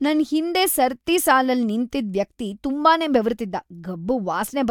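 No technical faults can be heard anywhere in the recording; the signal stays continuous and steady throughout.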